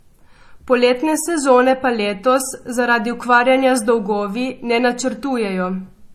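Throughout the speech, the top end stops dead at about 13.5 kHz, and two different kinds of damage sit on top of each other: a smeared, swirly roughness alongside a separate metallic, watery sheen in the upper band. This points to transcoding between lossy codecs, likely a low-bitrate MP3 around 40 kbit/s re-encoded to HE-AAC near 48 kbit/s. The second encoder spent its bits on the first one's artefacts, added its own, and kept the lower cut-off.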